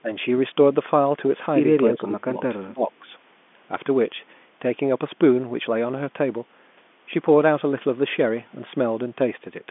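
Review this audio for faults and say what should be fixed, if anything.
The speech dips twice: briefly from 0.02 to 0.1 s by about 15 dB, then harder between 1.92 and 3.1 s, dropping about 25 dB. That's likely speech suppressed in double talk, with the echo canceller turning down the talker while the far end speaks. Tuning the canceller's double-talk detection should keep the near-end voice open.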